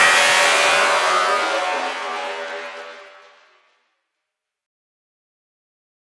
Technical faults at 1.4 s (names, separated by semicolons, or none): resampler restarted on every block